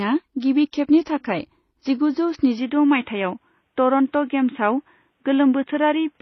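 From the first moment the speech carries two layers of coding damage at once, the likely result of transcoding between lossy codecs. The smeared, swirly quality of a low-rate MP3 stage sits under the metallic, synthetic top end of a spectral-band-replication codec, which fits a 24 kbit/s MP3 re-encoded as HE-AAC at a similar rate. Each pass works on the earlier pass's errors. On a spectrogram nothing appears above 6.2 kHz, with blocky, patchy texture in the upper bands.

At 2.59 s, right after "गिबि खेबनि थाखाय जिगुजौ", the input was switched to a poorer device, likely a second microphone or a headset in call mode. There is no gap, and the loudness stays about the same, but the speech suddenly turns narrow and boxy until the end. On the spectrogram the energy ceiling drops from 6.2 kHz to 3.8 kHz at that point, with a new, faint noise floor roughly 50 dB below the speech. The waveform shows no break or jump in level.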